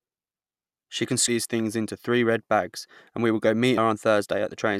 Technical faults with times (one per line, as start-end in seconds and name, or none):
1.25-1.28 damaged data in a compressed stream
3.75-3.78 damaged data in a compressed stream